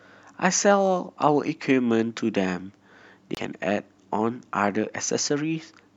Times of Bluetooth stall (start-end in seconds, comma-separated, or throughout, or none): 3.35-3.37